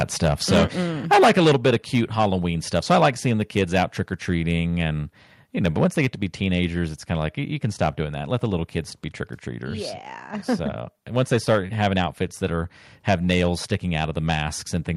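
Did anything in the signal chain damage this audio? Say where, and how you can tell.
Yes. Microphone overload at 0.0–4.57 s (about 14 dB over), 5.64–7.12, 7.64–8.78, 11.16–12.45 and 13.07–14.77 s: flattened, crackling peaks, likely input gain driving the converter past full scale.

Microphone volume stepped down at 0.52, 1.53 and 5.86 s: sudden level drops of about 2, 5 and 2 dB, likely call processing cutting input gain after clipping.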